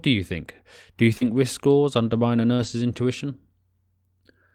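Speech with two brief dropouts, each followed by a rough stretch. Short concealed packet loss at 1.17–1.23 s and 2.55–2.61 s: about 40 ms went missing each time and the receiver extended the preceding sound, giving a smeared wobble. Right after each, a lost packet rebuilt from error correction (1.21–1.27 s and 2.59–2.69 s) leaves no smear or gap, only a rougher, noisier 40–60 ms. That fits low-bitrate backup copies of what sounds like two and then three packets.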